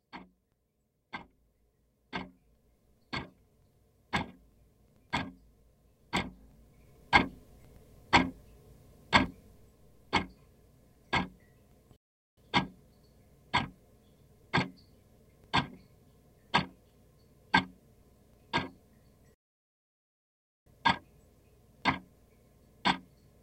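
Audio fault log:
11.96–12.37 s and 19.34–20.66 s, playback stall: the sound halts for about 0.41 s, then 1.32 s, likely because the player ran short of data. These are noticeable silences in mid-flow.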